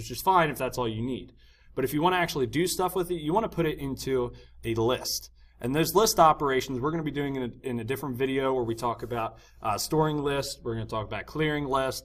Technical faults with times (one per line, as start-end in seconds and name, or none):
none